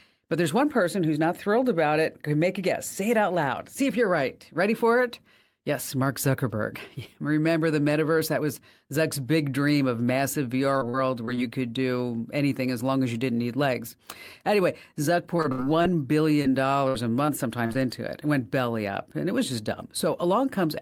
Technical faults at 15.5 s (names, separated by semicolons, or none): repeated packet loss (robotic sound)